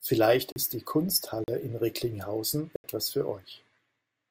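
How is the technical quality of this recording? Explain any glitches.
The speech has three dropouts, each a block of digital silence. At 0.52 to 0.56 s and 1.44 to 1.48 s the audio falls to zero for 40 ms, and at 2.76 to 2.84 s for 80 ms. Samples were replaced by zeros with no fade, so each gap is heard as a short hole.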